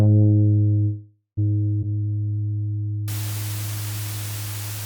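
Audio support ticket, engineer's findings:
Call audio freeze, 0.83 to 1.39 s: sound stalls, last bit smeared into a fading buzz, then about 110 ms of silence. Likely jitter buffer ran dry on late packets; resumes where it left off, nothing lost, just 0.54 s late.

Low bit depth with dither, 3.08 s to end: constant even hiss, no distortion, only around 10 dB under the sound. Fits a 5-bit path; dither before rounding spreads the quantisation error into flat white noise.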